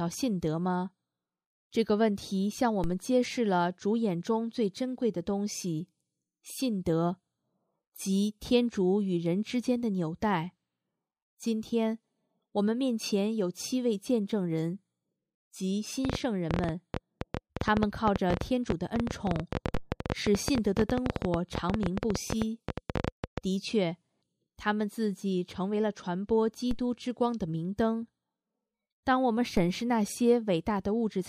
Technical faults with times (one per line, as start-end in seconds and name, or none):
2.84 DC step
16.05-23.39 train of clicks
19.74 DC step
26.71 DC step
29.57 DC step